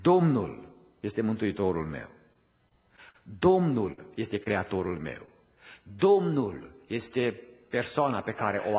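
Audio carried over a call link with nothing above 4 kHz, which points to a narrowband G.711 A-law path at 64 kbps, shows repeated packet loss (robotic sound) from 2.33 to 3.20 s. Five separate gaps, the longest 48 ms, were each patched by stretching the preceding sound, so the passage turns choppy. On a spectrogram it appears as a run of smeared, over-regular harmonic blocks broken by small seams. A burst of packet loss follows at 3.92 to 3.99 s, where about 40 ms went missing and the receiver extended the last sound as a decaying buzz or hiss before jumping ahead. The waveform shows a fading tail and then an abrupt restart. Short concealed packet loss also occurs at 4.43 to 4.48 s and 5.26 to 5.29 s. Each drops about 20 ms, which is briefly filled and blended back, so it is heard as a quick smear or wobble and seen as a faint smudged sliver in the spectrogram.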